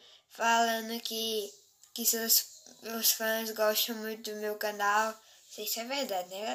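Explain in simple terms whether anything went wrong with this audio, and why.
From 0.41 s to the end, the treble boost applied for recording or transmission (an FM-style curve) was never undone. This pre-emphasis left on makes the high frequencies far too strong, so the sound turns thin, overly bright and hissy on sibilant sounds.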